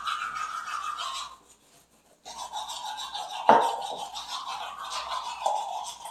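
No technical faults can be heard at any point in this sound.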